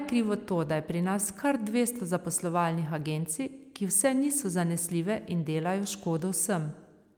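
Nothing stood out on listening to this speech recording.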